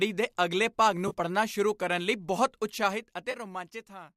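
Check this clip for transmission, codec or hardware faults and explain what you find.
Two kinds of fault are audible in this speech: two brief dropouts patched over by concealment, and a stepped level fade.

AAC frame loss with concealment occurs twice. At 1.08–1.13 s, just after "ਦੇ ਅਗਲੇ ਭਾਗ", and again at 3.31–3.35 s, there is a short smeared, noisy or phasey patch of about 30 ms. Each gap fits roughly three short codec frames going missing. The decoder fills each hole by reusing the last good spectrum with altered phase, so the sound blurs instead of cutting to silence.

Zipper noise runs from 2.60 s to 3.99 s, starting after "ਕਰਨ ਲਈ ਬਹੁਤ". A fine ticking, zipping texture rides on the sound as the level falls by roughly 15 dB. The gain moves in 1 dB jumps, around twenty per second, with no smoothing between them. Each jump puts a small discontinuity into the waveform, and the rapid train of these becomes the buzz-like zipper.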